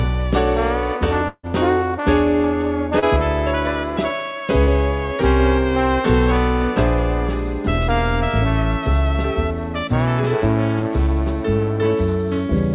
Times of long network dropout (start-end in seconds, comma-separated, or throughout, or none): 1.28-1.46